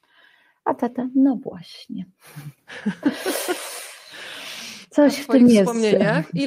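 Nothing in this speech recording stands out as a technical fault at any point.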